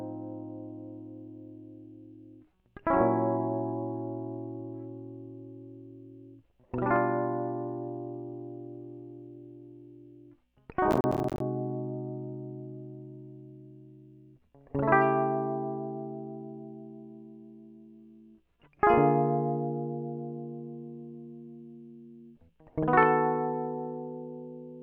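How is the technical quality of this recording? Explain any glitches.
There's one glitch in this music: processor overload crackle from 10.91 to 11.40 s. The machine kept missing deadlines on roughly ten-millisecond buffers, around twenty across that stretch, dropping short silent gaps that tear gritty holes in the sound.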